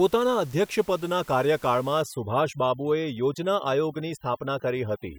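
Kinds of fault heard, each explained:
Overdone noise removal: after 2.03 s the room noise, about 26 dB below the speech, drops and breaks up into twinkling specks. An over-strong noise reducer is shutting off bands it judges noisy, quiet speech detail included.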